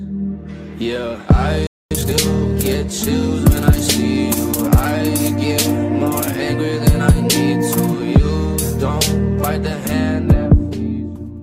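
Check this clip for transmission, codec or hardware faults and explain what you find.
Two linked faults come from the player side rather than the codec: a short dropout and a hurried recovery immediately after it.

From 1.67 to 1.91 s there is a playback stall: the sound cuts off mid-flow into silence for about 240 ms, likely because the player ran out of buffered data or its thread was held up. The waveform shows a flat gap, and the spectrogram shows a blank vertical band.

From 1.91 to 2.15 s comes time-compressed catch-up: the player clears its backlog by dropping small slices and cross-fading the rest, running at 2× speed. The sound rushes at normal pitch. The spectrogram shows squeezed but unshifted frequency bands.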